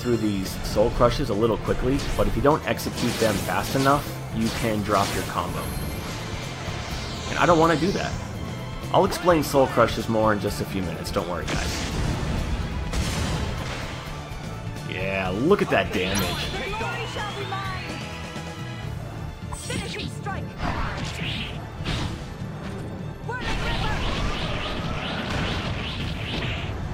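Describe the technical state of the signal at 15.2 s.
At 15.2 s the signal is intact, with no dropout, clipping, glitch or other fault audible at that moment.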